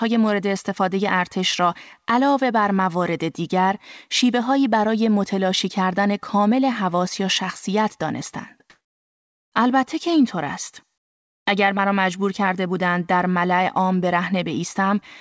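From 8.70 to 9.52 s, about 0.82 s, the real background drops out. A steady, featureless hiss replaces it, shifting in level by about 16 dB. This is likely comfort noise in place of the background. The sender paused transmission, and the receiver synthesised noise. Through the G.722 path, nothing sounds above 8 kHz.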